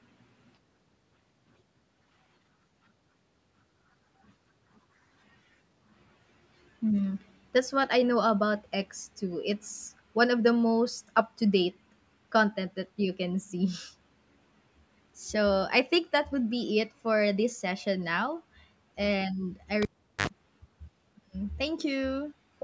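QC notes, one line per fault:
19.82–20.27 s, cable pulled and plugged in: a pop as the live lead comes out, about 0.4 s of near silence, then a 60 ms burst of 50 Hz mains buzz while only the tip touches, and a second pop as sound returns. Unlike a dropout, the hum burst and paired pops mark physical contact.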